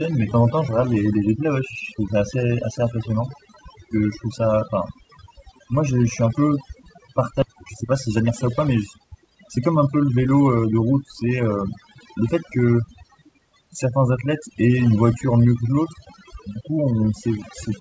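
Throughout, overdone noise removal mutes individual frequency bands near the noise estimate, leaving near-silent backgrounds with twinkling specks, unlike plain broadband hiss reduction. The call path passes nothing above 8 kHz. At 7.42 s playback does a skip ahead, abruptly dropping roughly a second of speech with no filler or silence, unlike a dropout gap. From 7.45 to 10.41 s, a jitter buffer speed-up trims short pitch-period pieces, about 0.4 s in all, so speech runs 14% faster at unchanged pitch, unlike resampling.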